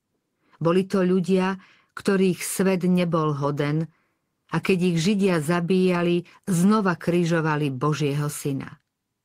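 No technical faults can be heard anywhere in the recording.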